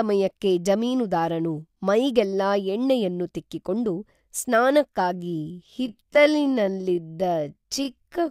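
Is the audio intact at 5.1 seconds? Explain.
No. A time-stretched section starts at 5.12 s and runs to the end, slowing the speech to about 0.6 times its pace. That was likely done by repeating short pieces to keep pitch, leaving it dragging while the pitch stays the same.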